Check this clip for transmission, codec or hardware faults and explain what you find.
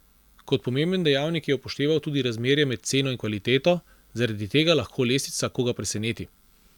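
Nothing wrong turned up here; the speech comes across without any faults to point to.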